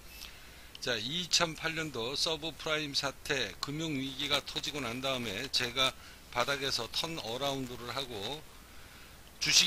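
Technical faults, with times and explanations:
4.06 to 9.67 s, buffer tearing: from 4.06 s to the end, a steady robotic buzz at 200 Hz rides on the sound. That rate points to a buffer period of about 5 ms. The writing program and the playback hardware have drifted out of step, so each period holds a sliver, a few percent of its length, of audio left over from roughly 15 ms earlier. Hard joins on both sides of that sliver repeat every period.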